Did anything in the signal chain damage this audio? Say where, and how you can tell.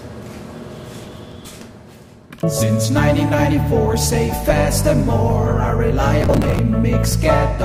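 Yes. The damage is processor overload crackle at the driver and buffer stage. A burst of gritty crackle runs from 1.05 to 1.74 s, and a denser one from 6.21 to 6.59 s. The processor fell behind and missed many buffer deadlines in a row. Each missed buffer was skipped, leaving a tiny hard-edged gap. The spacing suggests buffers of around 5 ms. Strung together, those gaps tear the sound.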